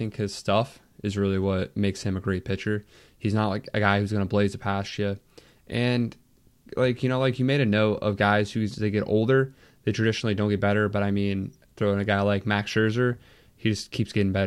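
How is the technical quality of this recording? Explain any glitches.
No glitches are audible anywhere in the recording, so there is nothing to explain.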